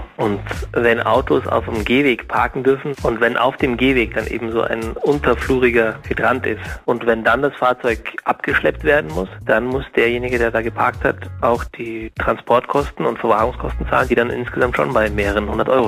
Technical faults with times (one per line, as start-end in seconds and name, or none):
0.00-15.87 sample clock jitter